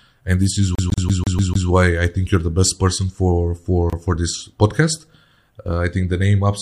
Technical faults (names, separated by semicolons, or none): CD stuck on one turn; gap at a join of encoded pieces